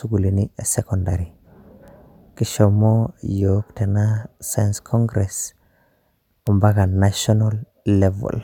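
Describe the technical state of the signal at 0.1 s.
At 0.1 s the signal is intact, with no audible fault at that moment.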